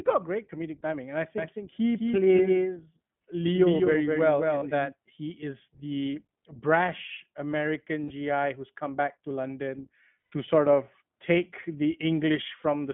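Throughout, the speech carries iLBC codec character: the band stops at about 3.4 kHz with little below 150 Hz, and each 20 ms frame is coded on its own, leaving a plainly audible rough, synthetic edge. This fits the 15.2 kbps mode.

From 1.38 s to 4.92 s a doubled audio track runs. A full-band copy trails by roughly a fifth of a second, a few decibels quieter, with no decay or room colour. It starts and stops abruptly, which most likely points to a second, slower capture path.

Lost iLBC frames occur at 4.58 to 4.64 s (40 ms), 8.04 to 8.12 s (60 ms) and 10.32 s (120 ms). In each gap the decoder repeats the last pitch cycle mixed with noise, giving a held, buzzy vowel, and clean speech resumes almost immediately afterwards.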